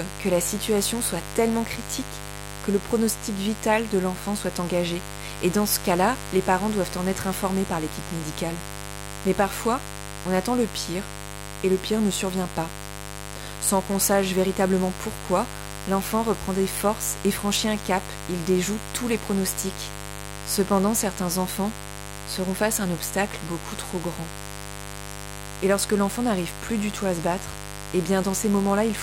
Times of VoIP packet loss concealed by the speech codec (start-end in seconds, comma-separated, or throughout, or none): none